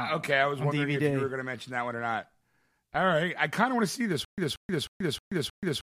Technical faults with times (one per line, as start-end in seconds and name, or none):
4.25-5.83 stutter with silent gaps